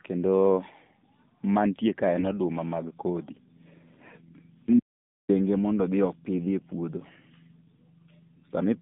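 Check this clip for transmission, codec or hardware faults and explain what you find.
Two faults here: mobile-codec coding throughout and one short dropout.

The whole clip carries AMR narrowband mobile codec damage. The band runs only from about 150 Hz to 3.7 kHz, and the voice sounds plainly buzzy and synthetic, which points to a low AMR-NB mode around 7.4 kbps.

From 4.80 to 5.29 s, just before "mondo odhi", there's an audio dropout to silence. For about half a second the sound cuts to silence with no room tone, likely a lost input link while recording continued.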